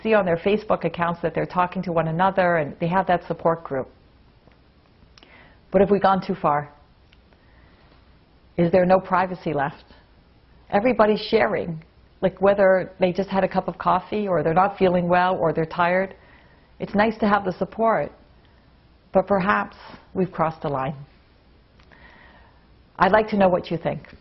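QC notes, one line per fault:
No faults found on this pass: level, timing and continuity hold steady throughout with nothing to flag.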